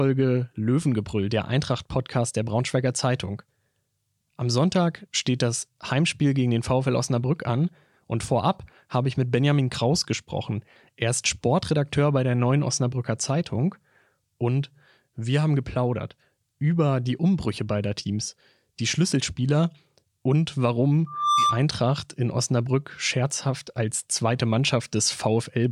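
A speech recording with a loudspeaker feedback squeal from 21.06 to 21.65 s, a 1.2 kHz tone swelling over roughly a third of a second to about 5 dB above the speech. On a spectrogram it shows as one bright horizontal line.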